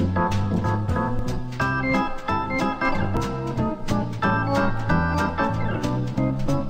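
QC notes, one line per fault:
1.19, 3.17 and 5.15 s: audio missing between chunks. Tiny skips about 2 s apart, roughly 20 ms gone each time, likely lost at each chunk handover and butted together.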